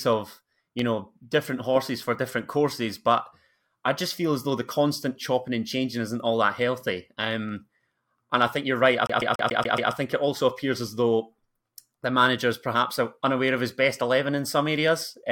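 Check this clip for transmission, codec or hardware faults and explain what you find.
Two faults stand out in this speech clip: a single loud pop near the start and a CD skip later on.

Loud pop, 0.79 to 0.81 s, just before "know different horses for". A sudden voltage pulse, likely from a plug, switch, static discharge or driver glitch, entered the signal path and was shaped by the circuitry after it. It is heard as one sharp pop, peaking around 10 dB above the surrounding level, while the speech continues underneath.

CD stuck on one turn, 9.07 to 9.92 s, between "think you're right I" and "think it also appears". A scratch kept sending the laser back to the same point each revolution, so a 142 ms slice of audio repeats six times, with a brief mute at each jump. This produces the fast, regular stutter typical of a skipping disc before playback moves on.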